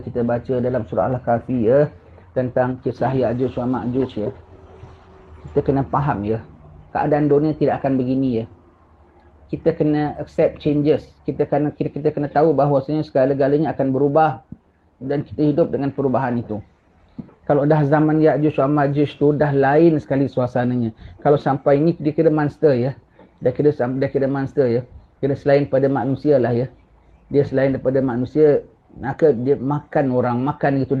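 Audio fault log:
No faults logged; the WebRTC call path sounds as expected for Opus, its top end stopping near 12 kHz, which fits a 24 kbps setting.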